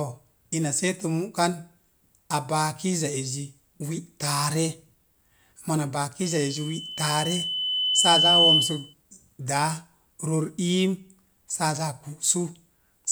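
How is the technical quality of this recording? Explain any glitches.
The recording has one clear problem: a loudspeaker feedback squeal in the middle of the speech. It starts at about 6.2 s as a thin tone near 3 kHz, swells over roughly two seconds, and ends at 8.94 s. The mic is picking up a speaker it's feeding, and at 3 kHz the loop gain tops one, so that frequency keeps reinforcing itself. At its peak it's about 10 dB louder than the speech, a piercing whistle right over it.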